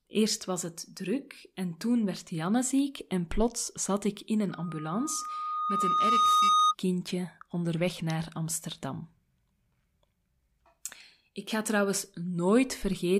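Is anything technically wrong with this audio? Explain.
Yes. From 4.50 to 6.75 s, loudspeaker feedback squeal: the microphone hears its own loudspeaker, and a 1.2 kHz tone swells over roughly two seconds, ending somewhat louder than the speech.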